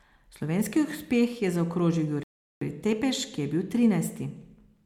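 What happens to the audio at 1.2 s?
Nothing goes wrong at 1.2 s; the speech carries straight through that moment with no dropout, click or distortion.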